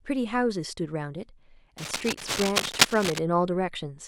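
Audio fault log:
1.78–3.20 s, cable scratch noise: A dense, ragged scratching and rustling runs over the speech for about 1.4 seconds. The bursts are uneven and come in quick clusters rather than as steady hiss. They sit at roughly the same level as the speech, so they compete with it directly. The likely cause is a worn cable, connector or control being moved. Its contact resistance jumps around rapidly, and each jump injects a burst of noise.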